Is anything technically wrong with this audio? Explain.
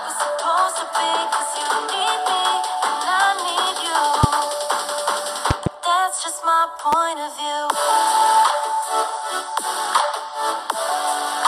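Yes. Loud pops at 4.24 to 4.26 s, 5.51 to 5.69 s (two in quick succession) and 6.93 to 6.95 s, likely voltage pulses from a plug, switch or static, jump roughly 15 to 20 dB above the sound, which continues underneath.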